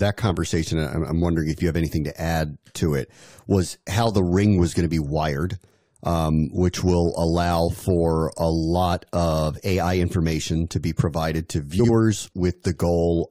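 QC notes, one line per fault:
11.79–11.89 s, frames out of order: two roughly 46 ms blocks play swapped, giving a garbled flutter; spectrogram shows broken formant tracks.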